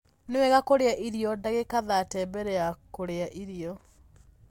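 Nothing stood out on listening to this speech recording.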